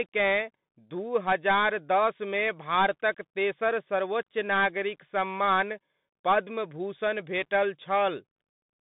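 From start to finish the speech carries Bluetooth CVSD headset codec damage. The band sits at roughly 150 Hz to 3.7 kHz, with nothing above 3.8 kHz, which fits a 64 kbps CVSD headset link. CVSD sends one bit per sample, up or down, and adapts its step size. Fast, loud high-frequency movement outruns the step, so sibilants come out scratchy and distorted, and a granular hiss sits plainly audible beneath the speech.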